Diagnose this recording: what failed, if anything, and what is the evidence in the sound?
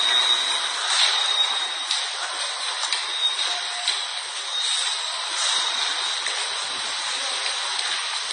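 The codec stage failed. Across the whole clip the top end is missing, with nothing above 10.5 kHz, and the sound carries a layered mix of smeared, swirly artefacts rather than one consistent texture. That points to transcoding between lossy codecs, likely an AAC-LC encode passed through Vorbis and then AAC-LC again, at low rates around 30 to 60 kbit/s. Each re-encode spent its scarce bits on the previous codec's artefacts and added its own, and the lowest band limit in the chain survived to the end.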